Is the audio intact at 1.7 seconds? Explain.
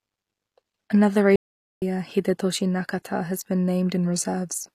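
No. At 1.7 s the audio is in an audio dropout to silence. It runs from 1.36 to 1.82 s, about 0.46 s. The signal falls to silence, with no room tone. The likely cause is a lost input while recording continued. Whatever was spoken there is gone.

Around the gap, the treble sounds synthesised rather than captured. S sounds turn gritty and metallic, and nothing sits above 14.9 kHz. This is likely HE-AAC compression at a low bitrate, fitting about 24 kbps. It copies lower bands upward to rebuild the top end.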